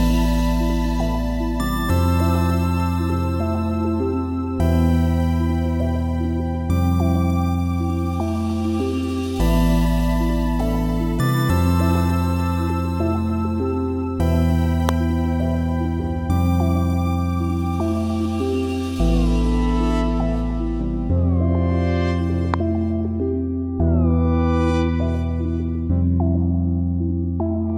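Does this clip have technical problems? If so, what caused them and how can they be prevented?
Yes. Two loud pops occur, at 14.89 to 14.91 s and 22.54 to 22.56 s, peaking about 20 dB and 15 dB above the signal while the sound continues underneath. Each is likely a brief voltage pulse from a switch, connector or static discharge entering the chain. Secure connectors, avoid switching during recording, and ground equipment to control static.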